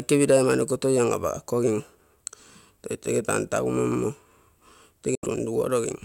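From 5.15 to 5.27 s the speech drops to abrupt silence, likely a Bluetooth dropout. It resumes further along, skipping ahead rather than pausing.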